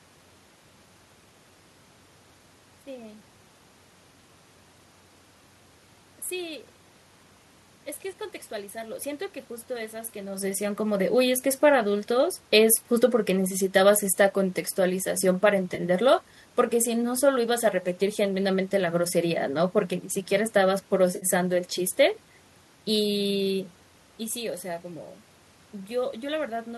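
Around 15.75 to 15.80 s, and again from 21.16 to 21.26 s, there's AAC frame loss with concealment. Chunks of the stream went missing, about 30 ms and then 60 ms, and the decoder bridged them from the last good spectrum, so each gap comes out as a brief smeared, noisy, phasey patch.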